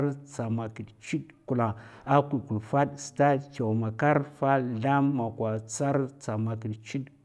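The speech signal shows no technical faults at any point in the recording.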